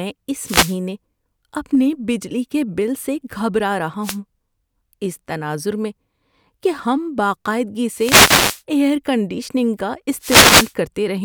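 Wireless microphone noise hits occur at 0.38 to 0.78 s, 4.01 to 4.18 s, 7.96 to 8.62 s just after "کہ ہم باقاعدگی", and 10.19 to 10.74 s just after "کنڈیشننگ کا". Each time, reflected radio paths cancel the FM signal, so receiver noise surges over the speech as a brief swish of static.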